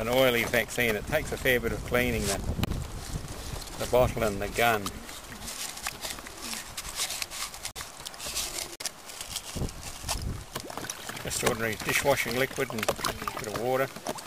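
Damaged compressed frames were rejected by the decoder and filled with silence, a corrupt frame muted fault, at 2.65 s, 7.71 s and 8.76 s. Each hole cuts in abruptly and lasts 42 to 60 ms, consistent with two frame lengths, while the timing stays intact.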